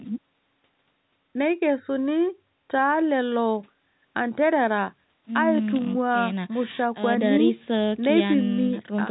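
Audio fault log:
No faults are present in this speech. The G.711 telephone coding keeps the sound within the usual narrow phone band, with nothing above about 3.9 kHz.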